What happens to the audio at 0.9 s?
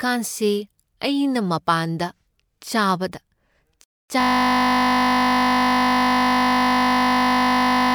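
Nothing goes wrong at 0.9 s; the speech there plays through cleanly, with no dropout, click or distortion.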